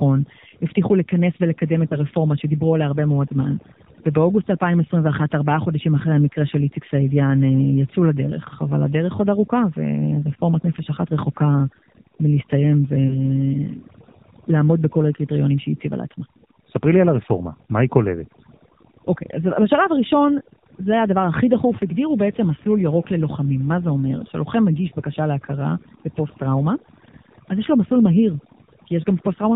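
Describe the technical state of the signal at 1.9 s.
At 1.9 s there is a lost AMR speech frame, spanning 1.88 to 1.95 s. The decoder bridges it by repeating the last good settings with falling gain, leaving a brief dip or warble. The gap fits a single lost 20 ms frame.

The AMR narrowband mobile codec applies here too. Nothing above 4 kHz passes. The speech sounds plainly buzzy and synthetic, which points to a low bitrate of around 7.4 kbps.

Overdone noise removal also affects this moment. Quiet bands near the noise floor are pushed to nearly nothing. The result is a lowered background that breaks up into twinkling specks.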